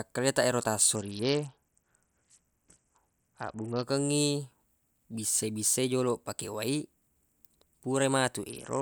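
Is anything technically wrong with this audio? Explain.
Yes. From 0.96 to 3.83 s, and again from 8.49 s to the end, the speech turns dull and gritty: the treble drops away and a rough, granular noise rides on what remains. This is a Bluetooth SBC bit pool drop. The link could not carry the full rate, so the encoder cut its bit budget. The top sub-bands were starved and the rest coarsely quantised, which fits a fall from bit pool 31 to about 7, near 61 kbps.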